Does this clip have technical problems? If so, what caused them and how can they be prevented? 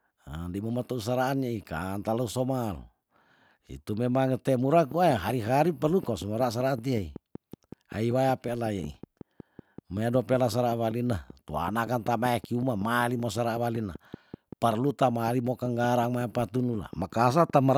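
Yes. Right after "itu memang te mura", at 4.92 s, a train of clicks starts and runs to 17.69 s: sharp, near-identical ticks at a steady 5.3 per second, around seventy in all, poking a few dB above the speech and heard in the pauses too. That regular pulse most likely comes from electrical interference from nearby gear or a faulty connection or power supply. Keep cables away from other equipment and check the interface's drivers and grounding before recording.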